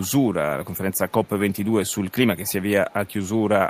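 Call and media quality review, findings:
Echo leak: faint delayed copy of the speech, trailing by 226 ms, roughly 25 to 35 dB down. Heard at 0–0.11, 0.65–0.77, 0.94–1.68, 1.85–2.12, 2.46–2.53 and 2.9–3.44 s. Likely far-end loudspeaker pickup passing an incompletely converged echo canceller.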